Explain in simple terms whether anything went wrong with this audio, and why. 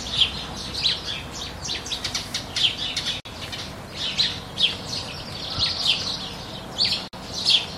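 Two short silences, about 53 ms each, cut into the sound at 3.20 s and 7.08 s. This is a gap at a join of encoded pieces: separately compressed sections were joined with their padding silence left in.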